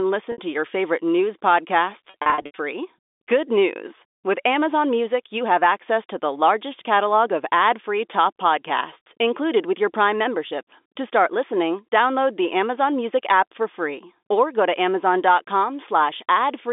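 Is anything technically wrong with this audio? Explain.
Yes. Packet loss with pitch repetition occurs twice. At 0.32 to 0.38 s, just before "to your favorite news", about 60 ms of audio goes missing. The receiver bridges the gap by looping the last pitch period, so the sound briefly holds on a slightly buzzy, sustained tone before normal audio resumes. From 2.1 to 2.58 s, the losses are scattered over about 480 ms and total 280 ms. The longest continuous gap is 80 ms, longer than the roughly 50 ms fade of the pitch repetition, so the longest gaps fade briefly into silence. The result is a stretch of choppy, stuttering sound with repeated buzzy holds. The audio passes through telephone-band coding consistent with G.711 mu-law at 64 kbps, with content limited to roughly 250 Hz to 3.6 kHz.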